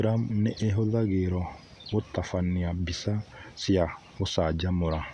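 No technical faults can be heard anywhere in the recording, and the signal stays continuous and steady throughout.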